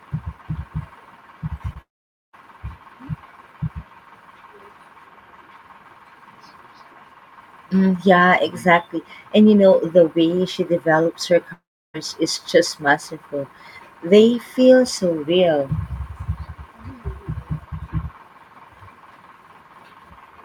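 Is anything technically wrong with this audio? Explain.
Yes. There are two kinds of fault in this speech. At 1.73 to 1.77 s there is short concealed packet loss. About 20 ms of audio arrived too late for the decoder. The receiver patched the gap by extending the preceding sound, so it is heard as a brief smear.

There are also two gaps that sound like a long network dropout, likely from lost packets. They occur at 1.81 to 2.35 s and between "way she develops her" and "is just masterful" at 11.53 to 11.96 s. Each begins with a fading continuation, followed by near-silence of about 0.48 s and 0.33 s. The speech then resumes with a section missing.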